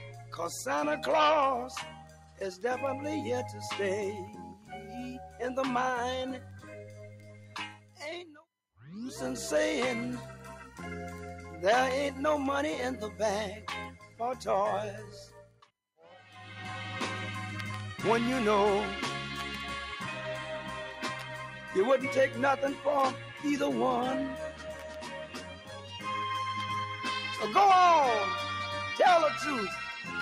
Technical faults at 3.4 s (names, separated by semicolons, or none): noise suppressor applied to music or sounds